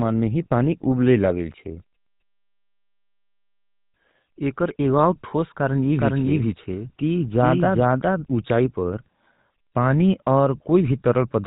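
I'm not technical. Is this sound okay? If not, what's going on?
No. A GSM full-rate codec, the old mobile-phone compression, affects the speech from start to finish. It rebuilds the voice from a simple throat-and-mouth model driven by evenly spaced pulses, so everything sounds buzzy and gravelly, and nothing above 4 kHz survives.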